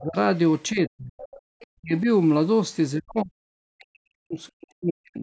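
The speech sinks in level from the start to 0.16 s, a dip of roughly 25 dB. From 0.71 to 1.2 s it falls much further, close to 40 dB. This is speech suppressed in double talk. The likely cause is both sides talking at once, so the echo canceller could not tell the near talker from loudspeaker echo and turned everything down together.

Right as that dip ends, a faint second voice comes through from 1.18 to 1.41 s, about 20 dB under the speech. A fainter scrap follows at 1.6 to 1.66 s. This is the other side's voice leaking through, probably because the canceller left part of the loudspeaker signal in the microphone feed.

The speech is suppressed again from 1.76 to 2.07 s, with a very faint leaked fragment at 1.97 to 2.01 s. Similar deep dips of about 40 dB follow from 2.96 to 3.32 s and from 3.53 s to the end, where the talker is turned down for around a second and a half in total.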